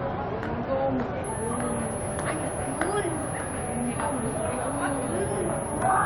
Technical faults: switching supply whistle

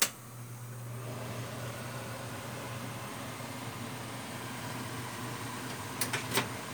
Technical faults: none

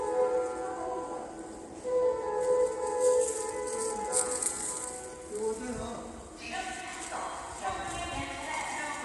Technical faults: low-delay AAC compression

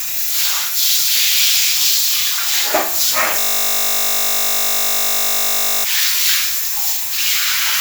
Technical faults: system hang loop

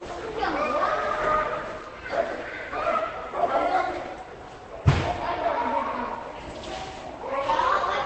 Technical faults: transcoding between lossy codecs

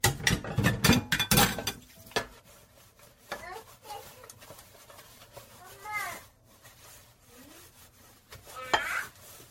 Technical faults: generation loss

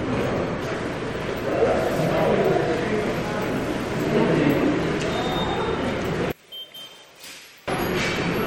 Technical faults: MP3 compression; one channel inverted

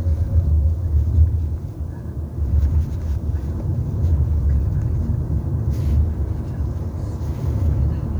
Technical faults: low bit depth without dither

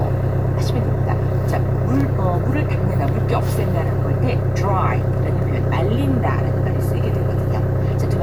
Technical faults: none

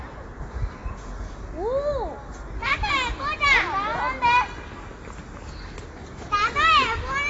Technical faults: AAC compression

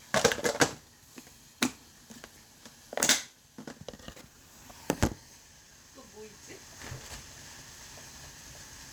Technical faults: none

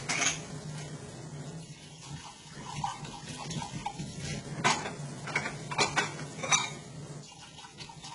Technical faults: HE-AAC compression; one channel drops out

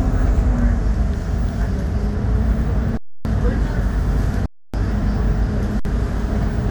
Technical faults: underrun with held sample

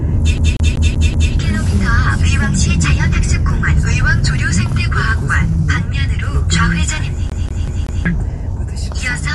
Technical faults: Dolby Digital compression; CD stuck on one turn

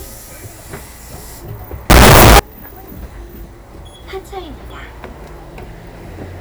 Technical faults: signed and unsigned mixed up

